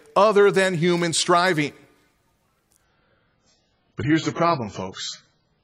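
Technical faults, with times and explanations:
2.84 s to the end: adaptive stream at a lower bitrate. At 2.84 s the speech abruptly loses its upper range, with nothing above about 7.6 kHz, and takes on a thinner, smeared edge from heavier codec artefacts. There is no gap or stall at the switch. The stream has stepped down to a lower-quality version, most likely because the connection slowed. The sound fits a fall from about 96 kbit/s to about 12 kbit/s AAC.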